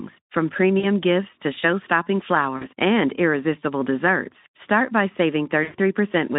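VoIP packet loss concealed by the speech codec occurs at 0.79–0.86 s before "gifts to", 2.57–2.67 s before "and irresistible desserts", and 5.63–5.76 s. Through the narrowband Speex line, the decoder stretches the last sound into a buzzy tone or coloured noise that fades, about 40 ms twice, then about 100 ms.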